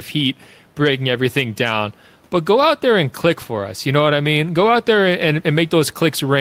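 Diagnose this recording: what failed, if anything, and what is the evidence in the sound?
Gain pumping runs through the clip. The room noise sits about 38 dB below the speech, and the gain swings around 5 dB. Unlike gating, the background never drops out. The likely cause is excessive input gain with a fast limiter in call processing.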